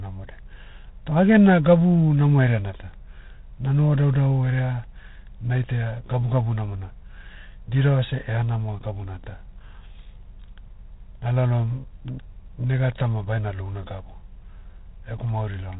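From start to finish the speech carries G.726 ADPCM damage. Each sample is coded as a coarse step away from an adaptive prediction, and the rounding error here is plainly audible: a harsh, rasping hiss that swells and fades with the speech level, which fits the 24 kbit/s mode. Nothing passes above 3.8 kHz. On a spectrogram the top is cut flat at 3.8 kHz, with grainy noise filling the gaps between harmonics, while the waveform looks fuzzy where it should be clean.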